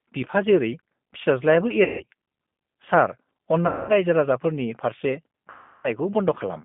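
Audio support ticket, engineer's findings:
G.729 codec, whole clip: speech band-limited to roughly 150 Hz–3.5 kHz, rough and synthetic, with plainly audible coding damage. Consistent with an 8 kbit/s G.729A stream rebuilding the voice from a vocal-tract filter, pitch predictor and sparse pulses.

VoIP packet loss concealed by the speech codec, at 1.84–2.04 s, 3.67–3.91 s and 5.50–5.89 s: voice smears into a fading buzzy tone or coloured noise, with about 160, 220 and 340 ms of audio lost. Decoder extrapolating the last pitch and filter at decaying gain, then slow recovery.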